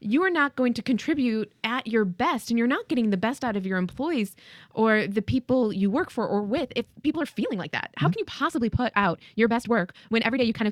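A time-stretched section runs from 6.54 s, just after "you work for or", to the end of this speech recording. Over that stretch the pace jumps abruptly to about 1.53 times normal speed while the pitch stays where it was, so the delivery sounds rushed. The likely cause is software squeezing the passage to fit a shorter length, holding the pitch steady by dropping short slices of audio and joining what remains.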